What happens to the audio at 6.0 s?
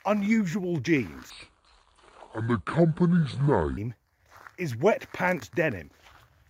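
Nothing goes wrong at 6.0 s; the audio runs on intact through that moment with no dropout, click, glitch or other fault.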